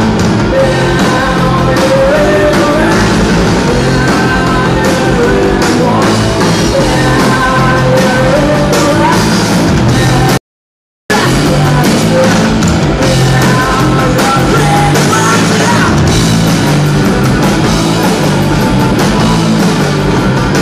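At 10.38 s the sound cuts to total silence, without room tone, until 11.10 s: an audio dropout to silence, likely from momentarily lost input.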